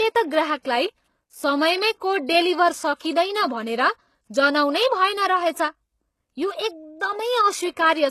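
Throughout the speech, low-bitrate audio was likely saved at a high bitrate as MP3, so nothing sounds above 12.3 kHz and the earlier encoding's artefacts remain.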